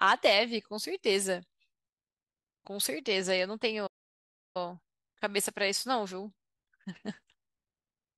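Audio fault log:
3.86 to 4.57 s, playback stall: the speech just stops mid-flow and the output sits silent for about 0.68 s before carrying on where it left off. The likely cause is the player running dry of data or its thread getting blocked.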